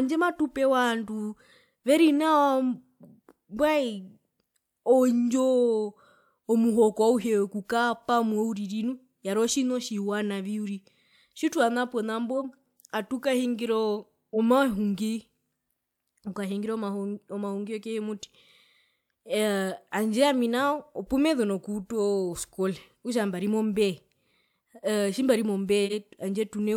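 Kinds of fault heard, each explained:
Corrupt frame decoded: a short chirpy burst at 12.37 s and a louder one at 25.85 s, each from one damaged frame decoded with misread values.
Compressed frames skipped: at 14.33 s the speech jumps ahead roughly 50 ms, because whole frames were dropped before decoding.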